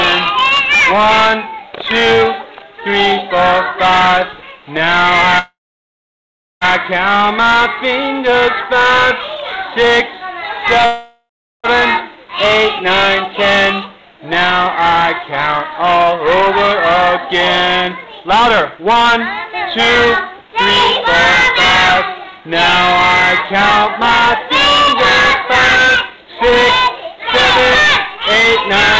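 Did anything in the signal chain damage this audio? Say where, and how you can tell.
Yes. Two call audio freezes, at 5.39–6.64 s and 10.86–11.67 s, point to the network and jitter buffer stage. Each fills the gap by stretching the last sound, which fades to silence for about 1.06 s and 0.35 s. Packets were likely held up and the buffer ran dry. The audio then resumes where it stopped, with nothing lost.

A jitter buffer speed-up runs from 13.90 s to 28.45 s, in the buffer stage. Playback is about 5% fast at unchanged pitch, because short pitch-period slices are repeatedly dropped, roughly 0.7 s in total. This cuts the extra delay held in the buffer.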